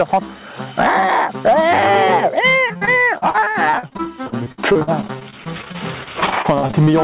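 Repeated packet loss (robotic sound) runs from 2.68 to 6.89 s: 41 short dropouts, the longest near 57 ms, each patched by stretching the previous sound, so roughly a fifth of that stretch turns choppy, heard through narrowband audio capped at 4 kHz.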